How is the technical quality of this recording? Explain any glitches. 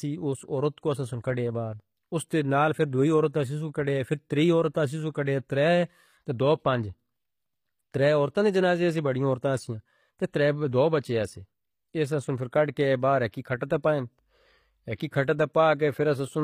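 Not great: there's plainly audible codec damage the whole way through. The top end sounds gritty and metallic, with nothing above 15.5 kHz. That's likely HE-AAC compression rebuilding treble from copied lower bands, which fits a low bitrate of around 24 kbps.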